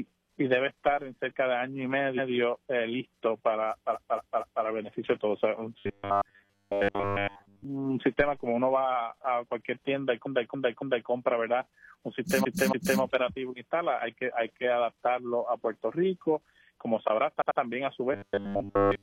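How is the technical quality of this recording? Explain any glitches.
The recording has two recurring problems: stutters where chunks of audio replay, and two stretches where the sound turns into a mechanical buzz.

Repeated frames show up five times. At 2.14 to 2.28 s a 139 ms block plays once more. At 3.90 to 4.60 s a 232 ms block comes back three extra times. At 10.22 to 11.06 s a 279 ms block repeats three extra times, at 12.40 to 12.96 s a 279 ms block repeats twice more, and at 17.37 to 17.56 s a 93 ms block repeats twice more. A run of compressed frames got written or sent more than once, so the decoder replays it. You hear a stutter, and the audio runs longer by each repeated stretch.

The robotic sound from repeated short buffers runs from 5.79 to 7.65 s and again from 18.13 s to the end. There's a rigid, metallic buzz at 100 Hz laid over the sound, which still loosely follows the original. 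Most likely, new audio wasn't arriving fast enough, so playback kept looping a tiny slice, which fits a 10 ms buffer. Most of the real audio in those stretches is skipped.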